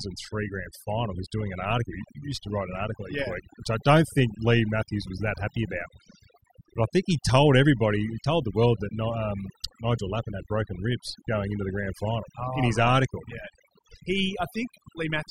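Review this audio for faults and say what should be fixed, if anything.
A noise reduction stage was set far too aggressively, and the result is overdone noise removal across the whole clip. Each frequency band that sits close to the tool's noise estimate is pushed nearly to zero, and the softer parts of the speech fall below that line and get cut along with the noise. Between phrases the background collapses to near silence scattered with twinkling specks. To prevent it, use a lighter reduction setting with a gentler floor.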